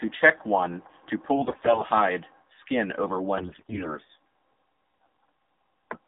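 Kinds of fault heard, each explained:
AMR narrowband mobile codec: The speech sounds buzzy, thin and synthetic, squeezed into a band of roughly 250 Hz to 3.7 kHz. A mobile speech codec rebuilds the voice from a vocal-tract model fed by sparse pulses, and the plainly audible damage fits a low rate near 7.4 kbps.
AMR bit errors: From 1.35 to 1.85 s, and more harshly from 3.38 to 3.96 s, the voice keeps its pitch and level but turns hoarse, scratchy and gargly. Flipped bits in the codec frames, about a tenth and then a fifth of them, scramble the model's pulses and values.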